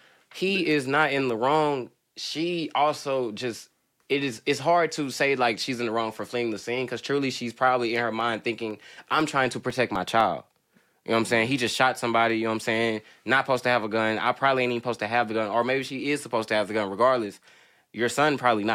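A speech clip with periodic USB or driver dropouts from 7.96 to 10.21 s, just after "because truly she's probably": about a millisecond of audio is replaced by silence every 0.25 s, giving around ten evenly spaced ticks as something repeatedly stalls the USB bus or audio driver.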